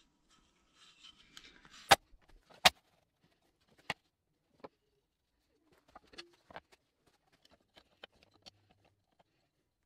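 Clock drift buffer slips recur from 0.98 s to 9.15 s, about five in all, spaced a steady 2.04 s apart. Each is a short, regular click or pop in the sound. The likely cause is two devices running on separate clocks, so the buffer between them gradually fills or drains until a small block of samples, perhaps fifteen, is dropped or repeated. That interval points to a clock mismatch of roughly 200 ppm.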